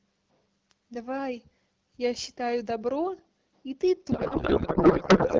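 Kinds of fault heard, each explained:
Codec payload misread: from 4.11 s to the end, the decoder parses octet-aligned AMR-WB as bandwidth-efficient, shifting every field and turning the speech into garbled noise and warble.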